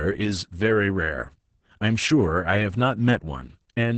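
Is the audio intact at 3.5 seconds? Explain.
No. Heavy Opus voice compression runs through the whole clip, including 3.5 s. The SILK coder's coarse excitation makes the speech hoarse and slightly robotic, a texture consistent with roughly 10 kbps. The wideband cut also leaves nothing above 8.8 kHz, so the speech sounds muffled.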